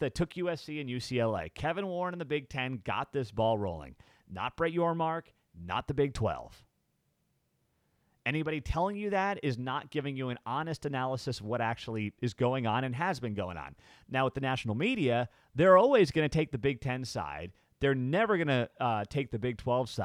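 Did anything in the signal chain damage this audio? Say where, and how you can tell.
No, nothing along the chain left a mark you can hear on this speech, so there's no stage to point a finger at.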